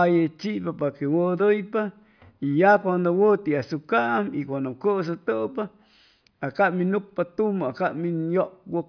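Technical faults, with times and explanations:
No technical faults can be heard in this speech clip.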